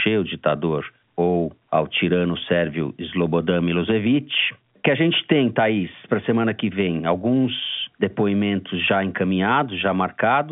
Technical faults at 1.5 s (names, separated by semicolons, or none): none